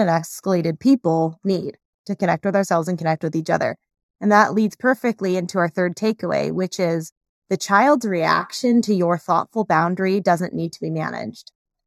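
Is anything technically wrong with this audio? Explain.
Yes. Channel delay (comb filtering) runs through the whole speech clip. One channel lags the other by well under a millisecond, and the mono sum cancels at evenly spaced frequencies, with the first notch near 3 kHz. The result is a hollow, phasey sound with fixed notches.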